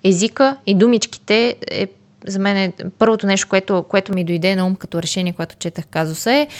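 Speech whose first 4.13 s sounds dull and narrowed, with nothing above 7.8 kHz, before opening up to full brightness with no gap and no level jump; the likely cause is an input switched to a poorer device. A spectrogram shows a flat ceiling at 7.8 kHz ending abruptly at 4.13 s, over a faint noise floor roughly 45 dB down, while the waveform stays even across the change.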